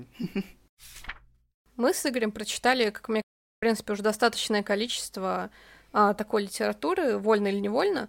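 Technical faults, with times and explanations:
3.22–3.63 s: playback stall, the speech drops to silence for about 0.41 s mid-flow, likely because the player ran short of data or its thread was blocked.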